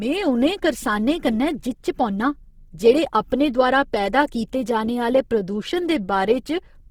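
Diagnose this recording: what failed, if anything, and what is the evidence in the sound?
Throughout the speech, voiced sounds turn grainy and rough, a noisy texture replacing clean tone, while content still reaches 20.3 kHz. The codec stage is likely at fault: Opus compression in CELT mode, consistent with roughly 16 kbps, filling starved bands with folded spectrum or noise.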